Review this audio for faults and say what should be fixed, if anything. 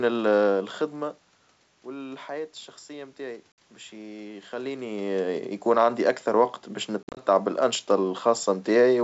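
There's packet loss on the ADPCM call in two places. At 3.52 to 3.58 s there's a clean-edged hole of about 60 ms, a handful of packets gone. Then from 7.03 to 7.20 s about 110 ms drops out in bits spread over 140 ms, with the longest single gap about 50 ms. The silence fill is only part of it. The decoder's predictor and step size lose sync with the sender's, so the speech comes back slightly distorted before settling over a few tens of ms. To prevent it, add packet loss concealment and a decoder state reset or resync after gaps, and sort out the jitter or loss on the network path.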